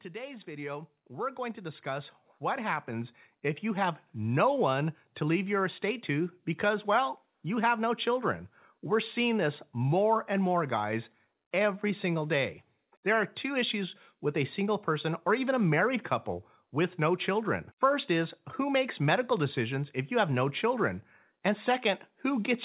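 From 0.11 to 4.2 s, speech and background swell together by about 14 dB. This is automatic gain rising, as the gain control slowly lifts an input it judged too quiet.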